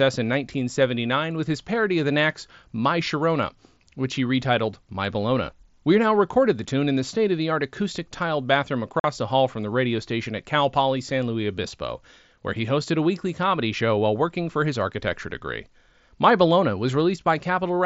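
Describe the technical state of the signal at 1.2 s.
At 1.2 s the speech is intact, carried through the Bluetooth mSBC headset codec's wideband path with no fault at that moment.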